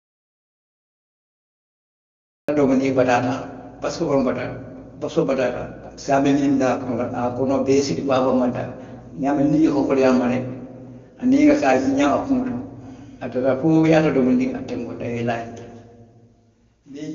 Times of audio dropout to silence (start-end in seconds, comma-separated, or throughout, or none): 0.00-2.48